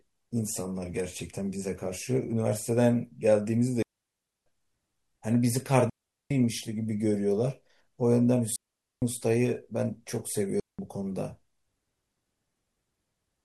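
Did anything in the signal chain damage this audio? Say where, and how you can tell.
Yes. The damage is at the radio link between transmitter and receiver: a digital wireless dropout occurs four times, at 3.82–4.46 s (0.64 s), 5.90–6.31 s (0.41 s), 8.56–9.02 s (0.46 s) and 10.60–10.79 s (0.19 s). Each is a clean gap of near silence that starts and ends with a very short fade, with no noise burst on either side. That is how the receiver behaves when it loses too much data and mutes its output.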